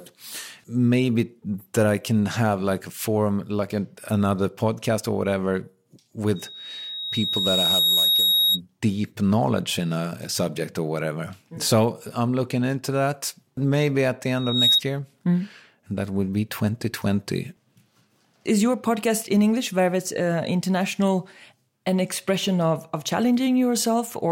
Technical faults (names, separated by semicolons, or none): loudspeaker feedback squeal